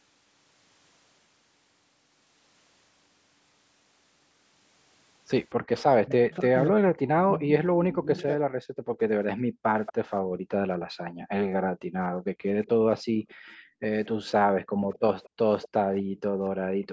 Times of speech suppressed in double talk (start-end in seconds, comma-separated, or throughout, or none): 6.05-8.40